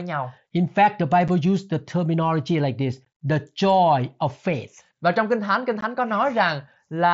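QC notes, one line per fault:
1.28 s, 3.05 s and 5.81 s, unconcealed Bluetooth headset packet loss: brief, hard-edged dropouts in the speech, just before "used the" and "the joy of faith", roughly 7.5 ms and then 15 ms each. A headset voice packet between headset and phone was lost and silence or an idle pattern took its place, so the cut edges are abrupt. The gaps fit one to two lost mSBC frames on an otherwise wideband link.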